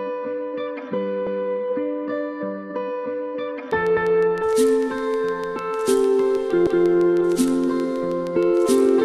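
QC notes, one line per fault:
1.27–1.47 s, 3.97–4.17 s and 6.67–6.87 s: overlapping chunks. The audio was handled in blocks about 2.5 s long, and each new block began 200 ms before the previous one ended, so a 200 ms slice plays twice at every join. This sounds like a short stutter. On a waveform, the same 200 ms shape appears twice in a row. On a spectrogram, a vertical seam sits at each join, with the patterns just before and after it matching.
3.71–9.05 s: train of clicks. Evenly spaced clicks arrive about 6.5 times per second, each with much the same shape and peaking a few dB above the sound. They run to the end of the clip and are audible as steady ticking over the sound and in its pauses. The likely cause is electrical interference from nearby equipment or a faulty connection or power supply. On a waveform they show as regularly spaced narrow spikes, and on a spectrogram as thin full-height vertical lines at fixed intervals.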